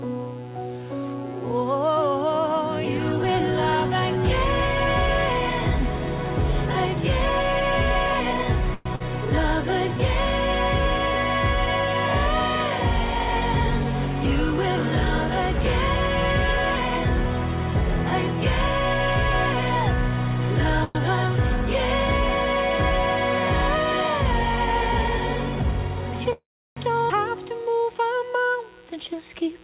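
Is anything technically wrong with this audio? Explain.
Yes. The audio has several transmission faults.

Call audio freeze, at 8.74 to 8.87 s, 20.84 to 20.97 s and 26.33 to 26.79 s: packets were likely held up and the jitter buffer ran dry. The receiver stretches the last sound into a fading buzz or hiss. At 26.33 s, about 320 ms of that stretch falls fully silent. Then the sound resumes where it stopped, adding delay without losing any audio.

Burst of packet loss, at 8.95 to 9.02 s: about 40 ms of consecutive packets never arrived in time. The receiver fills the hole by extending and fading the preceding sound for roughly 46 ms. Then playback picks up later in the stream, with that short stretch gone.

Jitter buffer speed-up, from 24.25 to 29.49 s: the buffer held more audio than its target, so the receiver repeatedly cut out short pieces of one or a few pitch periods, roughly 150 ms in total. 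Playback runs about 3% fast at unchanged pitch.

Skip ahead, at 27.08 s: with later packets already queued, the receiver discarded roughly 200 ms of audio to catch up. Playback jumps forward with little or no gap, and the sound on either side is spliced almost directly.

Throughout, there is no content above 4 kHz, which fits a G.711 call codec.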